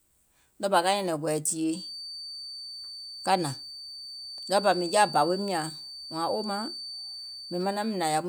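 Feedback whistle from 1.66 s onward: a thin 4.6 kHz tone about 15 dB under the speech, slowly swelling and fading, likely a speaker-to-microphone loop held short of runaway.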